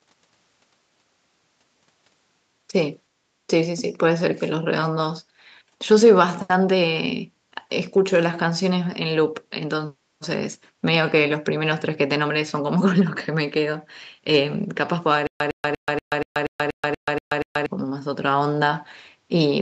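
From 15.27 s to 17.66 s the speech breaks into a stutter with silent gaps: a fragment of about 107 ms plays, then about 132 ms of digital silence follows, and the pair repeats 10 times at an even 239 ms period. The likely cause is a player or stream stall, with each retry replaying the last buffered fragment before running dry. The audio that should have filled that span is lost. The band-limited call-microphone sound, with nothing above 8 kHz, continues through this section.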